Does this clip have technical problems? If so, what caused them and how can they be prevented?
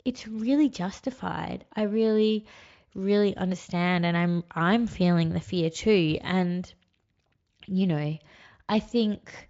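No, no technical faults.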